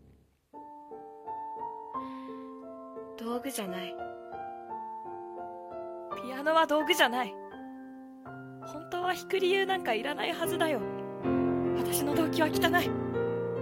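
From 0 to 6.0 s, the adaptive stream is starting at a low bitrate. The treble sounds thin and synthetic, with stronger codec artefacts, which fits a spectral-band-replication codec near 20 kbit/s. At 6.0 s, quality jumps cleanly, with no gap, consistent with roughly 96 kbit/s.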